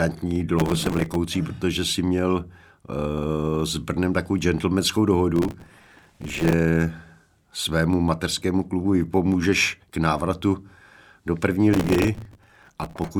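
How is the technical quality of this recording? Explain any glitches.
The recording is marred by three bursts of processor overload crackle in the speech. They run from 0.59 to 1.16 s (ending just before "protože si měl"), 5.36 to 6.53 s (after "takovou gentlemanskou") and 11.73 to 13.08 s (after "do první"). The processor repeatedly misses its deadlines for very short buffers, only a few milliseconds long, and replays stale fragments with hard edges. Each burst sounds like gritty tearing over the voice. A waveform shows dense step discontinuities, and a spectrogram shows clusters of thin vertical broadband streaks.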